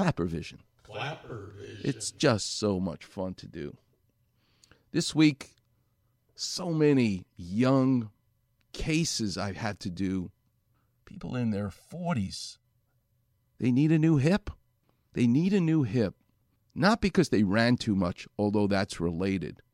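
Speech that turns hollow and phasey from 11.10 s to 12.65 s, with a thin colour as though heard through a tube. Outside that span it doesn't have this colouring. The fault is channel delay (comb filtering). One channel runs late by around 1.5 ms, and when the two are summed to mono the shared sound cancels at evenly spaced frequencies. The first notch falls near 300 Hz, with further fixed notches at regular intervals above it.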